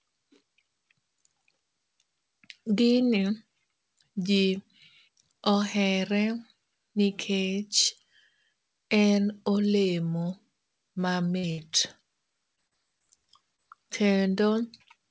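Speech carried over a call link, with nothing above 8 kHz, a band edge that fits a G.722 wideband codec at about 64 kbps. Two bursts of packet loss land close together, from 11.38 to 11.45 s and from 11.51 to 11.60 s. In each, roughly 60 ms of audio never arrived, and the receiver stretched the last sound into a held buzz or hiss that dies away before the speech picks up again further on. On a spectrogram each shows as a stretch of flat, repeated harmonics or smeared noise fading out, and in the waveform as a smooth decaying tail with no fresh onsets. Four short concealed packet losses follow, at 12.56 to 12.59 s, 12.67 to 12.73 s, 12.99 to 13.02 s and 13.56 to 13.60 s. Each covers 20 to 40 ms of missing audio, patched by extrapolating the preceding pitch or noise and crossfading back. They sound like brief smears or wobbles, and a short consonant may vanish. On a spectrogram they appear as thin vertical strips where the texture blurs or repeats, and in the waveform as small irregularities in the envelope.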